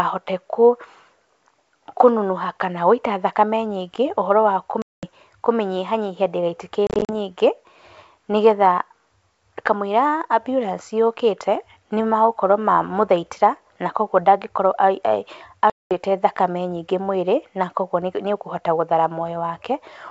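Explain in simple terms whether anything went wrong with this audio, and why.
The speech has three dropouts from packet loss on an ADPCM call: 4.82 to 5.06 s, a scattered burst of short gaps from 6.87 to 7.10 s, and 15.70 to 15.92 s. Chunks of the call went missing and were filled with silence. Afterwards the decoder briefly loses track, so the speech comes back slightly distorted.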